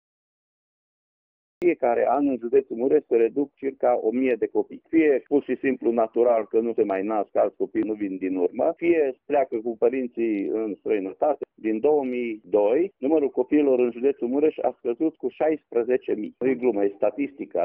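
The clip has a cut-off start. From 0.0 to 1.62 s there is only digital silence. At 1.62 s the sound appears abruptly, already in progress. There is no natural attack and no fade-in. The capture or stream evidently began late, so the opening of the sound was never recorded. What remains jumps straight from dead silence into the middle of an event. The entry sounds hard and truncated rather than like a real beginning.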